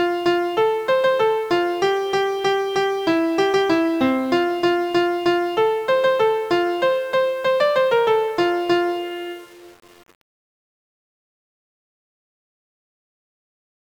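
From start to finish the sound carries a grainy, gritty distortion that shifts with the signal, roughest on quiet passages. This is likely low bit depth without dither: about 7 bits, rounded, leaving the error roughly 35 dB below the signal.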